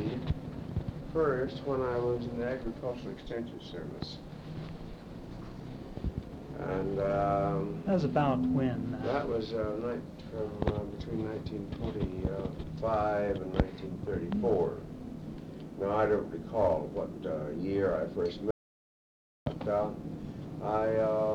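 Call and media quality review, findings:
Audio dropout to silence, 18.51 s to 19.46 s: signal cuts out and returns mid-flow, 0.96 s of silence with no room tone. Likely input loss at device or link while encoder kept writing silence; gap content unrecoverable.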